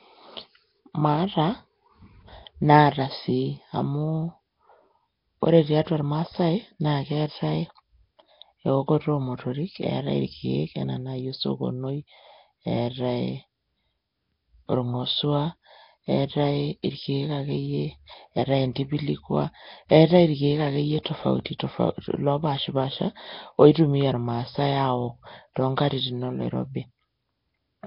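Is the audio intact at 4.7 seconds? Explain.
No. At 4.7 seconds, as across the whole clip, the speech carries heavy damage from what is likely Nellymoser compression, consistent with a rate around 22 kbps. This Flash-era codec works on short blocks at a fixed, very low bit budget, so quieter bands receive no bits and are replaced with synthetic noise. The result is a rough, hissy halo around the speech and a smeared, underwater character, with nothing present above 5.3 kHz.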